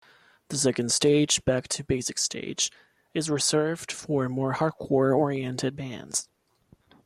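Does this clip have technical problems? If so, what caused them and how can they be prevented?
No, the speech in this clip comes through as a continuous, steady signal with nothing in it that points to a recording, transmission or playback problem, so there is nothing here that needs preventing.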